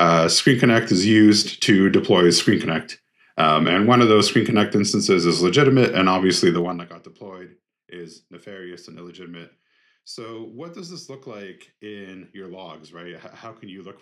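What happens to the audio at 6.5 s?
Zipper noise from 6.53 to 6.96 s: the level drops roughly 20 dB in unsmoothed 1 dB steps, about fifty per second, each step adding an audible tick.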